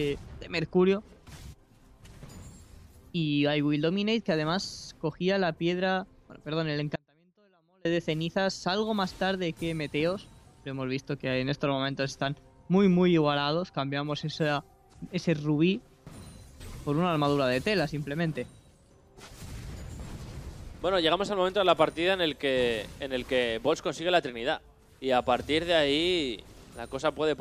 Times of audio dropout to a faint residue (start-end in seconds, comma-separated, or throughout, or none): 6.96-7.85